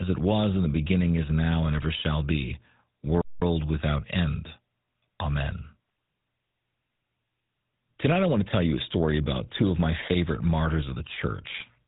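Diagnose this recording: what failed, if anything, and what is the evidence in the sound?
Codec stage: GSM full-rate coding throughout, with buzzy, gravelly speech and nothing above 3.8 kHz. Coarse pulse excitation causes the roughness, which a simple low-pass filter wouldn't, and fits a 13 kbps rate.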